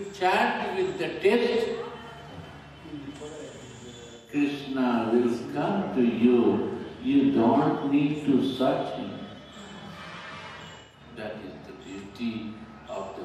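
AAC frame loss with concealment occurs at 0.48–0.59 s, 4.15–4.34 s and 10.80–11.00 s. The decoder rebuilt missing spans of about 85 ms and 128 ms from earlier spectra, which fits two and three lost frames. Each span sounds smeared and noisy. On a spectrogram, it appears as a blurred, frozen block. The waveform there looks noise-like.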